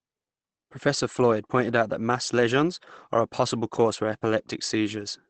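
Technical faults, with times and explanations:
Throughout, Opus compression: nothing is present above about 8.6 kHz, and the speech sounds muffled and hoarse, with plainly audible codec damage. This is likely Opus running its SILK speech mode at wideband, which fits a low bitrate near 16 kbps.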